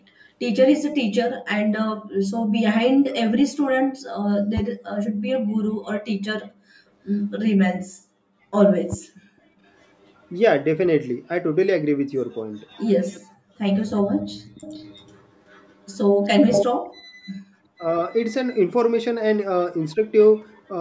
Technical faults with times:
0.00-20.80 channel delay (comb filtering)
7.08-7.21 echo leak
8.92-8.95 loud pop
9.65-10.28 echo leak
12.56-13.20 echo leak
14.46-16.65 echo leak
17.79-17.83 speech suppressed in double talk
19.91-19.95 echo leak
20.36-20.62 echo leak

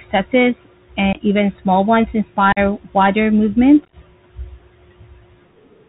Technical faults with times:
0.00-5.89 Bluetooth CVSD headset codec
1.13-1.21 unconcealed Bluetooth headset packet loss
2.52-2.58 unconcealed Bluetooth headset packet loss
3.85-3.94 unconcealed Bluetooth headset packet loss

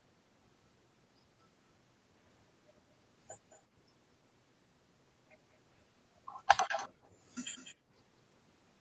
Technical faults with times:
5.52-5.57 echo leak
6.68-7.08 echo leak
6.89-7.23 background gated by the echo canceller
7.55-7.75 echo leak
7.75-7.92 background gated by the echo canceller

